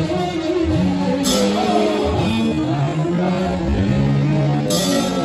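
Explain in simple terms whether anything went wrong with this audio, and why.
From 2.25 s to the end, the sound suddenly drags to roughly half speed while the pitch stays put: a time-stretched section. This likely happened because software stretched that part to fill a length by repeating tiny slices.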